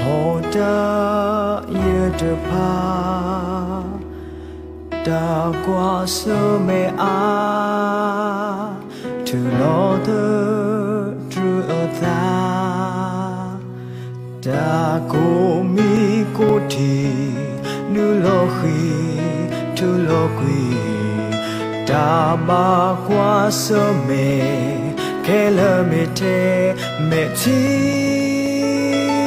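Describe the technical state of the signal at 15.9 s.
At 15.9 s there are CD scratch ticks, from 15.70 to 17.55 s. Each disc turn loses unrecoverable data. Interpolated or muted samples give eight brief ticks, the longest roughly 5 ms.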